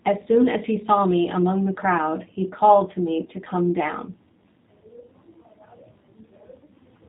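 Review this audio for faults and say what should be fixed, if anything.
Throughout, the speech sounds plainly rough and slightly synthetic, with a dull top end. This is G.729 codec damage. Each 10 ms frame is rebuilt from a vocal tract filter, a pitch predictor and a few pulses, which fits 8 kbit/s G.729A, and nothing above 4 kHz survives. To prevent it, carry the audio over a wideband codec such as G.722 or Opus instead of G.729.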